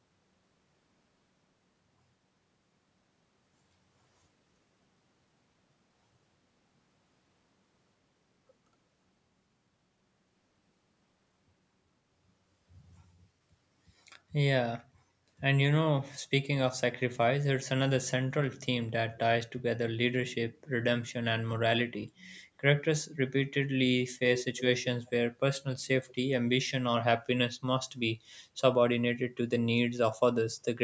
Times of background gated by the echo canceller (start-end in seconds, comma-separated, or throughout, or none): 14.93-15.27